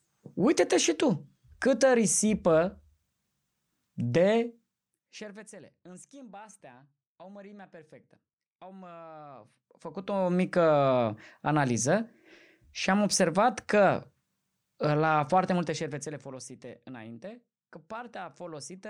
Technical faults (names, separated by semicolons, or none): zipper noise